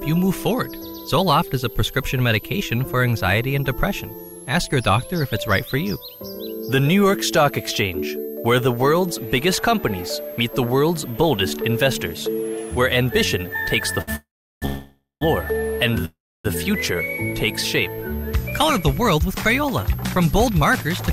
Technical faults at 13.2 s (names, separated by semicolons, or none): switching supply whistle